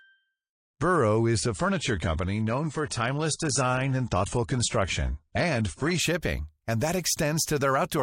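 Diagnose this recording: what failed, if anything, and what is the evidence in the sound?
The fault is an adaptive stream starting at a low bitrate, at the network and playback stage. From 0.0 to 6.0 s, nothing sounds above 10.1 kHz and codec smearing is stronger. At 6.0 s, just before "shipping and that", the quality improves abruptly without any gap, which fits a switch from about 43 to 96 kbit/s AAC. A dropout or rebuffer would leave a silence or stall.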